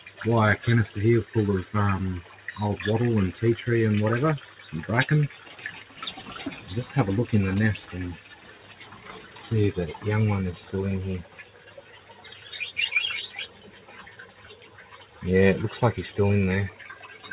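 A noise suppressor built for speech stays on throughout, so it treats steady parts of the sound as noise. Level swings by around 10 dB. Held sounds and tails sink while attacks pass, giving a pumping, thinning effect. It all sits inside a band that stops at 4 kHz, which fits a 64 kbps G.711 A-law call path. The sound is cut by the noise suppressor at 0.0–0.25, 4.42–4.66, 5.28–5.89, 8.17–8.5, 8.71–9.41, 11.22–12.5, 13.47–15.22 and 16.7–16.85 s. Drops reach about 9 to 11 dB. Fading sound dips and decays end early.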